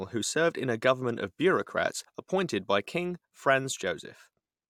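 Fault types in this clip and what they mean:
Overlap between stream segments: two delivered segments claim the same stretch of time, so the player discards audio that was never actually duplicated. At 2.05 s about 11 ms of the speech drops out, leaving a waveform jump heard as a tiny skip, consistent with roughly 4-second segments.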